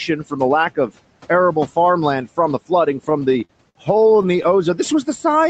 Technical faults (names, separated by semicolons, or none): repeated stalls (stutter)